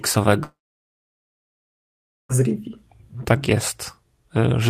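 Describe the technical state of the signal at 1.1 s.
A long network dropout runs from 0.43 to 2.32 s, so at 1.1 s the signal is silent. The likely cause is that no audio arrived for nearly 1.9 s. The last sound is stretched briefly, then fades to about 1.76 s of silence before the speech resumes with that stretch missing.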